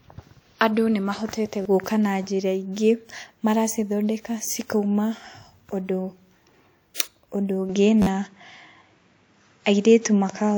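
Across the whole speech recording, low-bitrate audio saved at a high bitrate likely explains the smeared, watery codec artefacts. The spectrogram shows grainy detail and nothing above 20.1 kHz.

At 1.62 to 1.65 s, a repeated buffer plays a 10.67 ms slice three extra times, which fits a 512-sample buffer. It is heard as a brief buzzing stutter, and the waveform shows identical blocks with hard joins. A single extra play at 5.16 s gives a click.

From 7.69 s to the end, the input switched to a poorer device, likely. With no gap, the sound turns dull and boxy, shifts about 5 dB in level, and gains a noise floor roughly 50 dB down. On the spectrogram, everything above 7.6 kHz vanishes. Inside that stretch, at 8.02 to 8.06 s, another repeated buffer loops four extra times, heard as a rattling stutter with a visible run of copied blocks.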